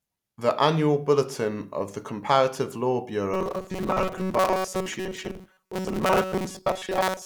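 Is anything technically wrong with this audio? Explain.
Yes. From 3.34 s to the end there is robotic sound from repeated short buffers. Audio likely arrived too seldom, so a roughly 5 ms chunk was looped over most of the speech, forcing a rigid, metallic 188 Hz buzz.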